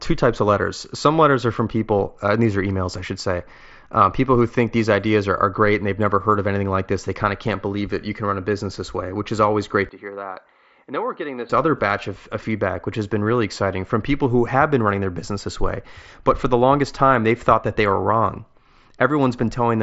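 From 9.89 s to 11.50 s, just after "which is always great", the speech turns dull and boxy, losing everything above 4.4 kHz, dropping about 10 dB and gaining faint new background noise, then clears before "other batch of of". The likely cause is the input switched to a poorer device, with no gap at the switch.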